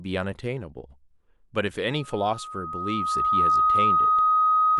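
Speech with loudspeaker feedback squeal from 1.94 s to the end: a 1.2 kHz tone swells over about a second and a half to roughly 10 dB above the voice, a horizontal line on a spectrogram and a thickening waveform envelope, from microphone-to-speaker loop gain exceeding one.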